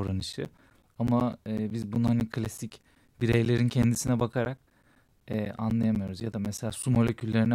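From 0.07 s to 7.46 s, the speech carries periodic USB or driver dropouts. Every 0.125 s, the audio path stalls briefly. About 10 ms of sound is replaced by silence each time. This gives a steady ticking, eight per second, wherever there is signal.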